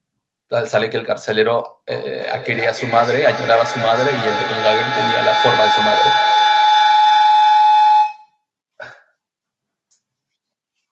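From 1.89 s to 8.44 s a feedback howl takes over the speech. A loudspeaker's output re-enters a nearby microphone and gains level on every trip. It settles near 1 kHz, pulses roughly every 300 ms, and peaks about 3 dB above the speech.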